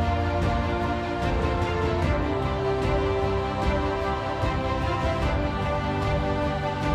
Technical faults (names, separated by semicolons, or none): none